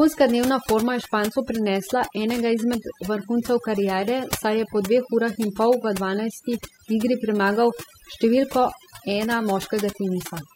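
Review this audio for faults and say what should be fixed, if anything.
Overdone noise removal runs throughout the speech. The reduction pushes individual frequency bands down or out whenever they sit near its noise estimate, so quieter speech detail disappears too: the background drops and breaks up into twinkling specks. To prevent it, set the noise reduction gentler, taking off only a few decibels so that some natural background remains.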